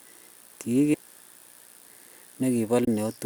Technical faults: damaged data in a compressed stream

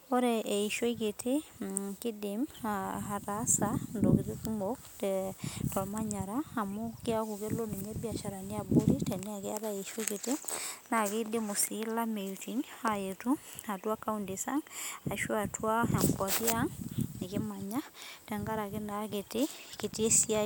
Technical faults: none

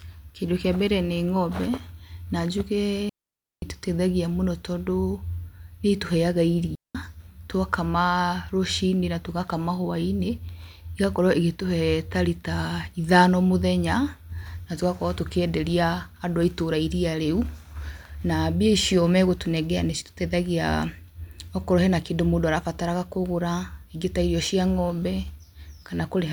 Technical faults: digital wireless dropout

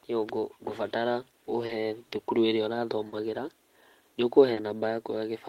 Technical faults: clock drift between sender and receiver; short stall from a late packet

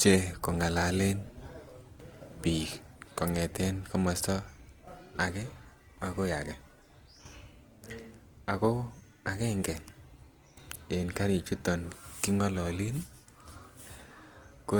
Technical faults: Opus compression

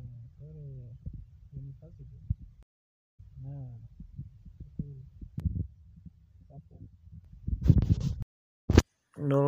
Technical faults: stream reconnect; channel delay (comb filtering)

